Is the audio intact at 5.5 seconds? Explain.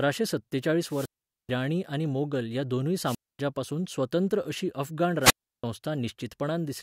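No. A wireless microphone squelch dropout runs from 5.20 to 5.64 s. The radio link fades, hiss rises, then the receiver's squelch mutes the output for 336 ms before the speech returns. The waveform flattens into a near-silent gap, and the spectrogram shows a blank vertical band.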